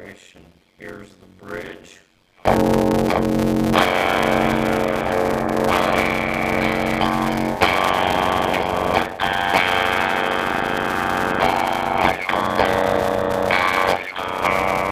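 From start to end, a padded block size mismatch inserts silent gaps. It buzzes at 91.9 Hz and slows the audio to 0.53 speed, timbre unchanged.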